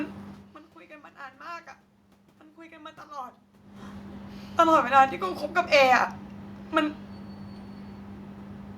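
No technical fault can be heard anywhere in this speech recording. The steady background noise belongs to the room, and the changes in level near half a second and again around three and a half seconds come from the talker moving relative to the microphone.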